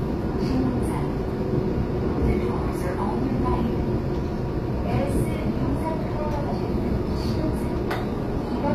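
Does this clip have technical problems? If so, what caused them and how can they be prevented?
Yes. Throughout, the treble sounds bright but synthetic and gritty, with nothing above 14.9 kHz. This is likely HE-AAC compression: the upper band is rebuilt from copied lower bands, not simply dulled as with a plain low-pass, which fits about 24 kbps. Encoding at a higher bitrate with plain AAC would prevent it.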